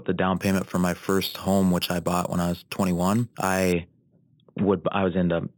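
From 0.37 to 3.73 s, imaging from sample-and-hold upsampling: samples were simply repeated, likely from an 8 kHz original, leaving mirrored images between 4 and 8 kHz, about 16 dB down, heard as metallic fizz tracking the speech.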